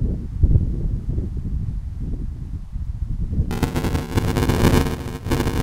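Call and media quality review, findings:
Buffer tearing, 3.51 s to end: 200 Hz rattle over the sound, present only with signal. Playback ring buffer read/write slip; roughly a third of each period replays audio about 10 ms old.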